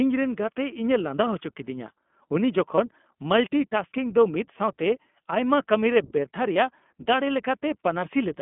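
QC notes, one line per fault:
Throughout, iLBC codec: speech is confined to roughly 200 Hz to 3.5 kHz, and the independently coded 20 ms frames leave it plainly rough and synthetic, fitting about 15.2 kbps.
2.76 s and 6.54 s, lost iLBC frames: a single 20 ms frame drops each time. The decoder repeats the last pitch cycle with noise, briefly holding a buzzy vowel before recovering immediately.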